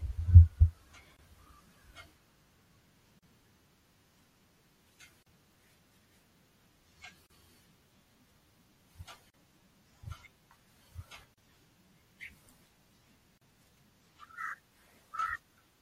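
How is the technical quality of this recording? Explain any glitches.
The recording has two clear problems: a compressed, smeared quality throughout, and a regular series of brief dropouts.

Throughout, the speech sounds watery and swirly, with dulled treble, metallic edges on s sounds and softened consonant attacks. This is likely MP3 compression at a low bitrate, around 64 kbps. Short of bits, the encoder cuts the high frequencies and drops weaker frequency components that flicker on and off between frames, which produces that unstable, chirpy texture.

The speech also drops out briefly every 2.0 seconds, at 1.17, 3.19, 5.23, 7.26, 9.30, 11.34 and 13.38 s. The first silence lasts about 24 ms and the rest about 38 ms each, then the sound carries on where it stopped. These are gaps at joins of encoded pieces: the audio was encoded in two-second chunks and joined untrimmed, so each chunk's encoder start-up delay and end padding remain as silence, with edges smeared by the codec.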